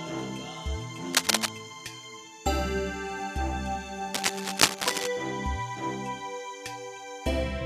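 Cable scratch noise breaks into this music clip from 1.13 to 1.48 s and again from 4.13 to 5.08 s, as dense, uneven scratching bursts sitting noticeably above the music, likely from a worn cable or connector being moved so its contact resistance fluctuates rapidly.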